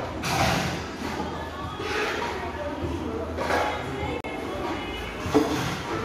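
At 4.21 s the sound drops out abruptly for 37 ms, with hard edges on both sides, before resuming at 4.24 s. This is a gap between stream segments: the timestamps of two consecutive segments, apparently 4-second chunks, left a small hole that the player padded with silence, so nothing was lost.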